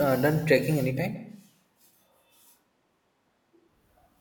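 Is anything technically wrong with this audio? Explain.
Yes. From 1.17 s to 3.66 s, right after "uh done trekking", the recording most likely stops using the close microphone and switches to a distant microphone further from the talker. Because that pickup hears more of the room than of the mouth, the speech turns suddenly hollow and roomy, loses bass, and drops roughly 5 dB in level. Room noise rises to about 25 dB below the speech. At 3.66 s the close sound returns just as abruptly.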